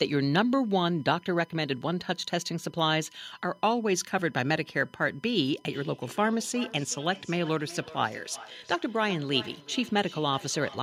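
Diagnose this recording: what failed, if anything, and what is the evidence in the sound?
The first fault, a USB whine, sits in the analogue wiring and power. A steady 1 kHz tone runs through the whole recording, about 35 dB below the speech. It appears as a thin, unbroken horizontal line at 1 kHz on a spectrogram. The current the USB bus draws in 1 ms frames is leaking into the audio through a shared power or ground path.

The second fault is a feedback echo between two devices, which arises in call processing. From 5.71 s to the end, the speech comes back at intervals of roughly 400 ms, with the loudest returns about 17 dB below the direct sound. A spectrogram shows fainter copies of each syllable shifted right by about 0.4 s, and the waveform shows smaller trailing bursts. A second nearby device is playing the call aloud, and this microphone picks up that playback. Its echo canceller cannot remove a signal it did not play itself.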